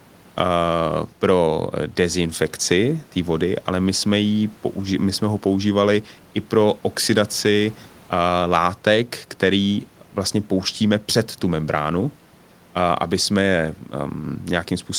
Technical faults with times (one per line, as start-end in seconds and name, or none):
none